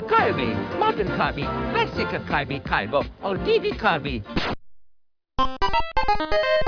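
Nothing here needs flagging: no dropouts, glitches or distortion turn up anywhere in the audio.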